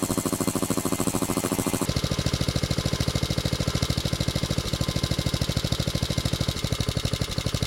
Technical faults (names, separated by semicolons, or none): planar audio read as interleaved